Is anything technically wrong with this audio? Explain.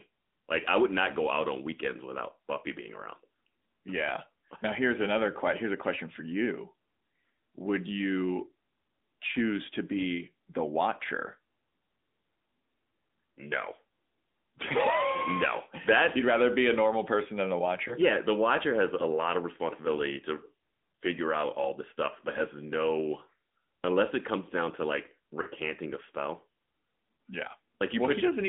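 Yes. Throughout, the speech sounds thin, buzzy and plainly synthetic, confined to about 200 Hz to 3.6 kHz. This is the AMR narrowband mobile codec, rebuilding the voice from a vocal-tract model at a rate consistent with roughly 10.2 kbps.

Brief dips and warbles at 17.88 to 17.93 s, 25.42 to 25.47 s and 27.16 to 27.18 s are lost AMR speech frames. The decoder fills 20 ms gaps, and about 40 ms at 25.42 s, by reusing the last good settings at reduced gain.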